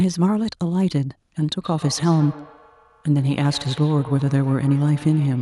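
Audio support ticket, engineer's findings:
Feedback echo between two devices, 1.6 s to end of clip. Speech returns as repeats roughly every 150 ms, thinner and ringing, peaking at about 19 dB below the direct speech. Probable component: second device in the same room on the call. Mechanism: its speaker output re-enters the first microphone, and each device's echo canceller removes only its own playback, so the loop persists.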